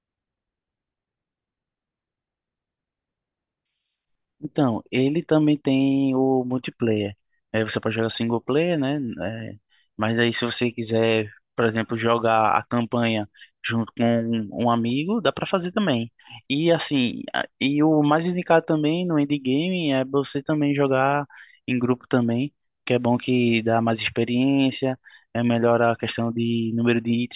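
No technical faults can be heard.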